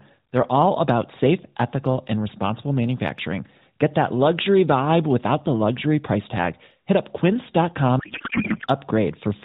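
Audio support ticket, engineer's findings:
Speech replaced by garbled noise and warble, barely tracking the talker, 8.00 to 8.67 s. Codec payload misread in the AMR depacketiser: octet-aligned frames parsed as bandwidth-efficient, so fields land in the wrong bit positions. AMR narrowband path band-limited below 4 kHz, light codec colouring.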